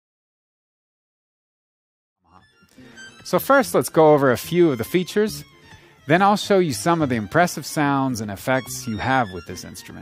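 No technical faults can be heard in the signal, which rises in a smooth editorial fade-in from around 2 s to full level at 3.32 s.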